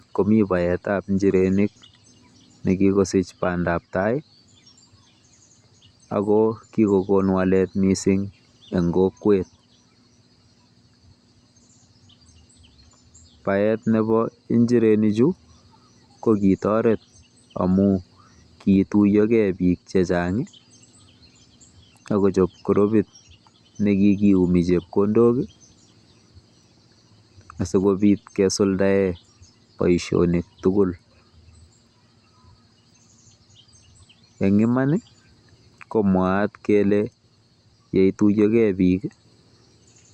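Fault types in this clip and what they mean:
No technical faults can be heard anywhere in this speech recording, which shows no disruption to the signal at any point.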